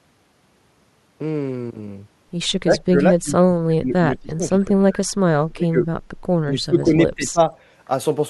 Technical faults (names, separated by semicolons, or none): speech suppressed in double talk